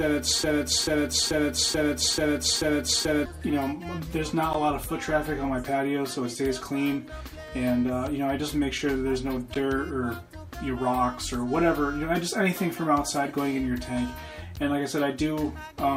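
The audio opens in a broken-record loop that is already under way when it starts. From 0.00 to 3.26 s, a fragment of about 436 ms repeats exactly, back to back, six times. Nothing new plays during that stretch, so the material meant for it is missing. The likely cause is a stall in the player, encoder or stream, which kept resending the last fragment it held. After that comes a gap between chunks, heard three times, at 4.53, 9.54 and 14.56 s. Each is a short hole of about 12 ms. They fall every 5 s, which points to the audio being sent or stored in 5-second chunks. Silence was left at each join. No sound is lost at these points. It is only interrupted.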